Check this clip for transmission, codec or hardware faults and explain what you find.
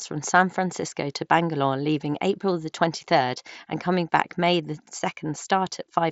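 No faults are present: the speech is carried by the Bluetooth mSBC headset codec working as intended, with the band reaching up to 8 kHz and only the light grain on louder passages that this wideband headset path leaves.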